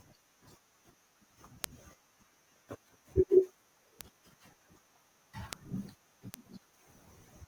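Bit error spikes land at 1.64, 4.01, 5.53 and 6.34 s. Each is a single sharp, broadband tick (about -7 dBFS at the first, about -13 dBFS after), from a flipped bit jolting a sample or few. Unlike a dropout or edit click, no audio goes missing and nothing follows the speech.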